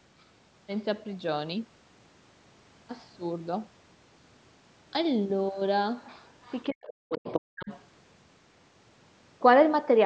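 At 6.26 to 6.31 s the echo canceller likely failed to remove the loudspeaker's playback from the microphone, so the other side's voice leaks through as a very faint scrap, far below the speech. From 6.7 to 7.27 s, with both sides talking at once, the canceller likely could not separate its own talker from the echo and turned everything down. This is speech suppressed in double talk. For roughly half a second the talker's speech drops deeply, close to vanishing in places.

At 7.25 to 7.41 s the canceller likely let the far end slip past again. This time the leaked voice is nearly as loud as the talker, a second voice over the speech. From 7.53 to 7.7 s double-talk suppression likely struck again, cutting the speech steeply for a brief moment. At 7.71 to 7.79 s a faint remnant of the other side's voice likely leaks through once more, well below the speech. Nothing in the clip extends above 8 kHz, which fits normal call microphone processing.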